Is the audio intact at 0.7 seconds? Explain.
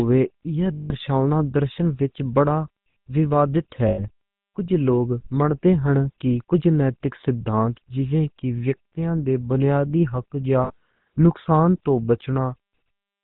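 No. The GSM full-rate codec runs through the whole clip, so at 0.7 s nothing reaches above 4 kHz and the sound already has a buzzy, gravelly roughness from the coarse pulse excitation. A spectrogram shows a hard ceiling at 4 kHz with grainy harmonics below it.

Just after, from 0.74 to 0.94 s, come lost GSM frames. The decoder kept repeating the last good frame, which fits about eight 20 ms frames, and the result is a rough, metallic ring. On a spectrogram it appears as frozen horizontal bands.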